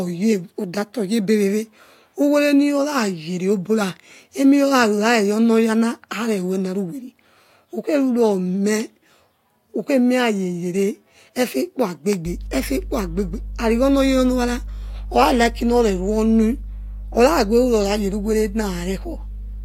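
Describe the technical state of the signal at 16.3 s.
At 16.3 s the speech carries mains hum, running from 12.26 s to the end: a steady 50 Hz tone, strong relative to the speech, from power-line coupling.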